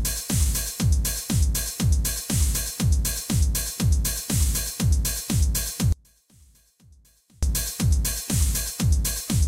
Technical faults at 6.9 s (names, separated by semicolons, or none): audio dropout to a faint residue